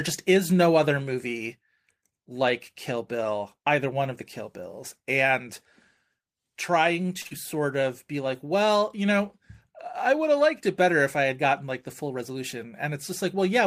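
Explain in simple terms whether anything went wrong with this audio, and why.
Three things went wrong, all close together in how the call's audio was delivered.

At 7.21 s there is a short stall from a late packet. A chunk of audio arrived late and the receiver had nothing ready to play, so it stretched the last sound for 34 ms until the chunk turned up, then carried on from the same point. Nothing is lost, but that sound lingers a touch too long, and everything after it plays 34 ms later than before.

Straight after, from 7.27 to 7.33 s, comes a short concealed packet loss. This time 40 ms of audio never arrived in time to be used. The receiver covered the gap by continuing the sound it had just played, then blended back into the real audio. You hear a brief smear or wobble, and a short sound falling in that gap can drop out.

From 11.64 to 12.38 s there is a jitter buffer speed-up. The receiver was holding more waiting audio than it likes, so it trimmed many tiny slices, roughly a twentieth of a second in all, to catch up. 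The voice keeps its normal pitch but runs about 6% faster for that stretch, so it sounds slightly hurried.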